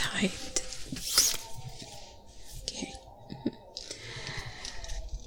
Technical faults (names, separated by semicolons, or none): none